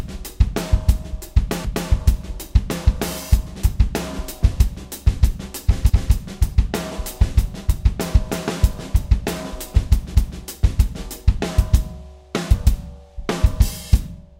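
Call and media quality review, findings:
Overlapping chunks at 1.65, 5.90 and 10.15 s: stutter as a 250 ms slice replays at each 4 s chunk join, where each block starts before the previous one ends.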